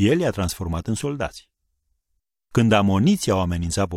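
A short speech recording with no audible technical fault anywhere in the signal.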